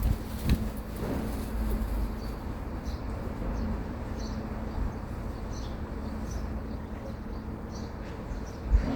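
From 6.52 s to 7.81 s there is a call bitrate drop. The bandwidth estimate fell and the encoder was forced to spend far fewer bits, which fits a fall from around 64 kbps to roughly 28 kbps, held at its lowest for about 1.2 s. With fewer bits to work with, the encoder quantises the signal more coarsely, so the sound turns rougher and less detailed over that stretch before the bitrate recovers near the end of the clip.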